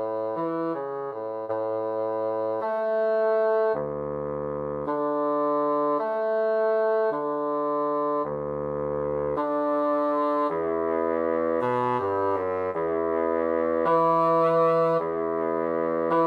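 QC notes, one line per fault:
No faults found; nothing to log for this clip.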